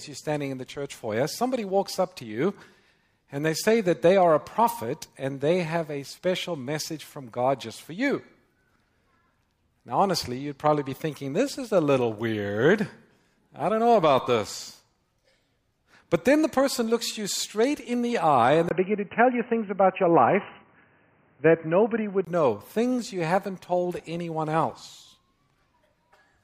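Input switched to a poorer device, 18.69 to 22.27 s: after a brief 20 ms gap, the sound turns dull and boxy, with nothing above 3 kHz, a faint new noise floor well below the signal, and little change in level. This likely comes from capture moving to a narrower-band microphone.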